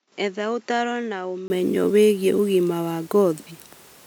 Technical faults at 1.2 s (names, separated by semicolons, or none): input switched to a poorer device